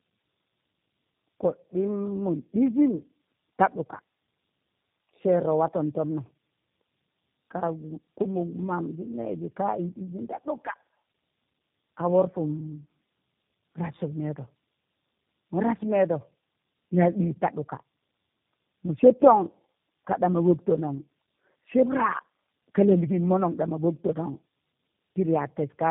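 Throughout, the speech sounds rough, muffled and warbly, with nothing above 3.7 kHz. This is tandem speech coding: three speech codecs in a row, each re-encoding the previous one's damage.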